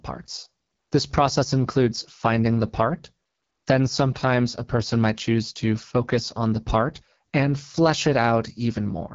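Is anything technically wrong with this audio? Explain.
Yes. Throughout, the speech went through an AMR wideband (HD Voice) codec at a low mode, which fits 8.85 kbit/s. Its sparse pulse modelling leaves the speech rough and raspy, with nothing above 7.6 kHz.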